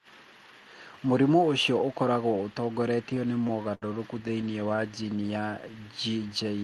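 From 3.09 to 3.84 s the speech catches and drags in a run of about ten brief holds, the longest near 70 ms and faded, with roughly a fifth of that stretch filled in; from 4.28 to 4.80 s a lighter series of about eight shorter holds, none beyond about 18 ms, follows. These are repeated stalls (stutter): packets arrived late, the jitter buffer kept running dry, and the receiver stretched the last sound until data resumed, so nothing is lost but the flow stumbles.

Between 4.95 and 5.22 s the speech runs at about 89% speed with unchanged pitch, adding about 39 ms and drawing sounds out slightly. This is a jitter buffer slow-down, where the receiver repeated single pitch periods to rebuild its reserve. The call path's Opus coding, whose top end stops near 12 kHz, sits under all of this.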